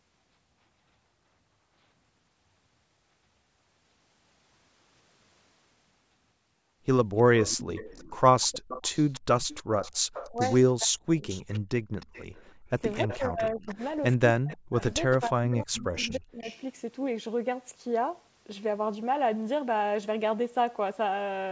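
From 7.17 to 10.56 s, and again from 11.28 to 16.59 s, a faint delayed copy of the speech trails the original by about 307 ms, roughly 20 dB down. This is echo leak, likely from a far-end loudspeaker whose echo canceller let some of the signal back through. The fixed lag and weak, separate copy set it apart from room reverberation.

Overlapping these, from 10.29 to 11.24 s and from 12.81 to 16.48 s, the main talker's speech dips sharply while both sides talk at once, falling by as much as about 40 dB. The first stretch loses under a second in total and the second loses around 2 s. This is speech suppressed in double talk, where the canceller likely treated the talker as echo and turned both down. The cuts track the overlap, which separates them from network dropouts. The missing content above 8 kHz is the call's ordinary microphone band limit.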